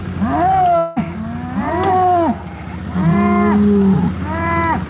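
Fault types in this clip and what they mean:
Long network dropout: likely a network gap from 0.78 to 0.98 s, where fading concealment fills about 180 ms before the audio resumes with that stretch missing.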